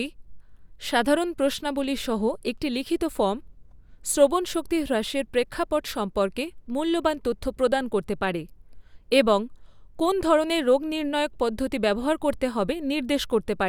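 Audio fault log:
No faults are heard in this speech recording. There is nothing to enter in the log for it.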